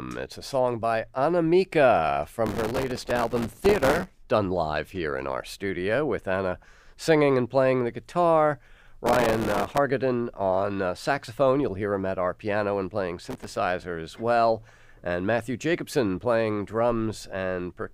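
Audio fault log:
2.47–4.18 s: processor overload crackle. Around two hundred missed deadlines, each refilled with stale audio, fitting buffers of roughly 1.5 ms, form a gritty tearing burst.
9.06–9.78 s: processor overload crackle. About a hundred late buffers repeat old fragments with hard edges, so a shorter crackling rasp rides over the speech.
13.25–13.56 s: processor overload crackle. A few dozen missed buffers replay stale audio, producing a brief crackle that ends as the load passes.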